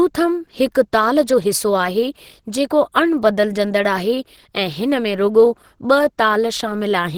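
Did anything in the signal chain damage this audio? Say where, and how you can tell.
Yes, the codec. Speech is grainy and hoarse throughout, with noise-filled bands. That fits Opus compression in hybrid mode, likely near 16 kbps.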